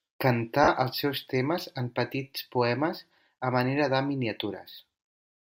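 At 0.64 to 0.68 s, just before "els seus temes en", lost LE Audio frames leave a 40 ms hole, which fits four 10 ms frames. The decoder refills it with the last spectrum under random signs, heard as a brief noisy smear: a spectrogram shows blurred harmonics, the waveform a hissy patch.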